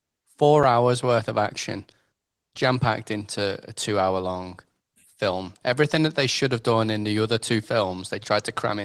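A speech clip with a block of digital silence at 0.63 s, just before "hours worth of action". The signal drops straight to silence for about 5 ms and then returns, with no fade on either side. At this length it is heard as a tick or dip rather than an audible gap. The length fits a 256-sample buffer that was not filled in time. The Opus compression in hybrid mode at 20 kbps leaves only light coding texture.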